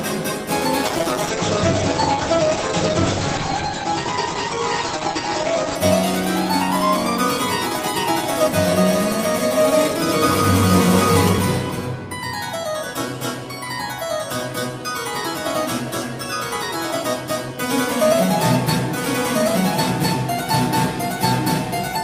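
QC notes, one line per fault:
0.87 to 5.83 s, call bitrate drop: the sound goes rough and watery and loses its top end, which points to the encoder falling from around 64 kbps to roughly 12 kbps, with coarser coding and the band narrowing to about 8 kHz until it recovers.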